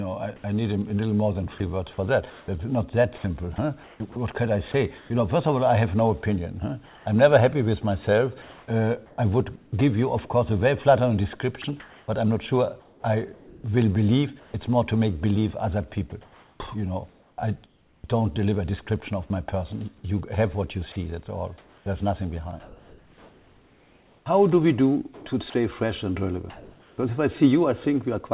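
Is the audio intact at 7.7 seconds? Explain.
Yes, the audio is intact at 7.7 seconds: nothing breaks or drops out there, and the only things heard are the narrow band of the call path, with nothing above about 4 kHz, and its usual coding noise.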